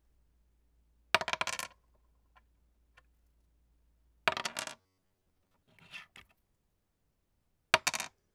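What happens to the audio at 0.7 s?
Nothing goes wrong at 0.7 s; the audio plays through that moment intact, with no dropout, click or distortion.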